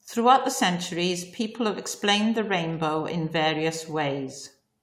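No technical faults are audible anywhere in the recording.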